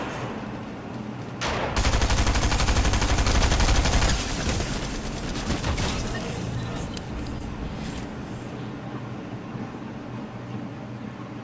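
No technical faults can be heard anywhere in the recording.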